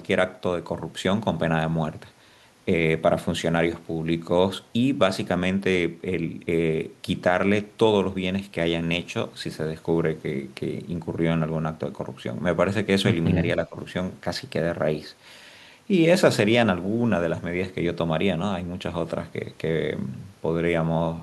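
A speech clip with one brief dip in level from 13.67 to 13.76 s, lasting roughly a tenth of a second and falling by around 10 dB at its deepest before the speech returns to its previous level. The likely cause is speech suppressed in double talk, where an echo canceller, unable to separate this talker from returning loudspeaker echo while the far side also spoke, turned everything down. On a waveform this shows as a short notch in the envelope, and on a spectrogram as a thin vertical band of reduced energy across the speech.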